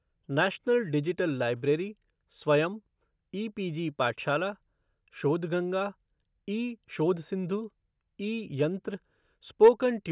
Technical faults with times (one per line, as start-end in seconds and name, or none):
none